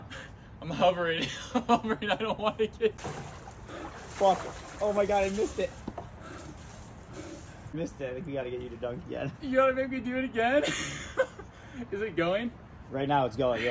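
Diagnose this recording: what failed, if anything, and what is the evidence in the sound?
Nothing failed here that I can hear: no stage in the chain leaves a mark on the sound, so there's no evidence of a fault to diagnose.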